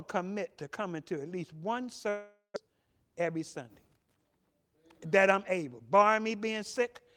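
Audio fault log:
2.09–2.58 s, long network dropout: right after "to at least one", the stream likely stopped delivering packets for nearly half a second, and about 400 ms of the speech was lost. The receiver covered the gap by extending the last sound as a fading buzz or hiss that decays into roughly 120 ms of silence before the speech resumes. The resumed speech skips the lost part, and the playout timing ends up shifted by around 50 ms.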